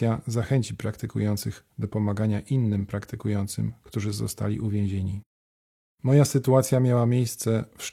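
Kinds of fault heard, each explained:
No kinds of fault are heard in this speech, so there are none to explain.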